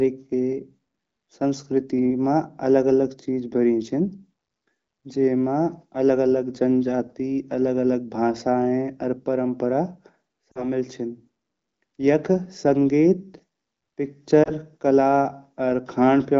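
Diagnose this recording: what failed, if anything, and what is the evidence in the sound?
Network stage: lost AMR speech frames at 10.52 to 10.67 s and 14.43 to 14.50 s, heard as a brief, smeared warble that sags in level. The first fits two lost 20 ms frames and the second fits one. The AMR-WB decoder replayed the last pitch and vocal-tract settings at falling gain. On a spectrogram, the harmonics freeze and fade. On the waveform, the envelope shrinks.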